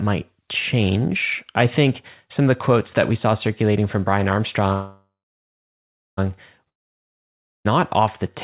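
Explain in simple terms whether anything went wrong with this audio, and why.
Two stalls interrupt this speech. From 4.72 to 6.19 s there is a call audio freeze: the last sound fades to about a second of silence, then the speech resumes exactly where it stopped. Nothing is lost, only delayed, likely because packets were held up.

From 6.69 to 7.67 s comes a long network dropout. It sounds similar, with a fade and near-silence, but when the speech returns at "off the", roughly a second of it is gone for good, likely because packets never arrived.

Throughout, the sound has the narrow, phone-like quality of a call line that carries nothing above 4 kHz.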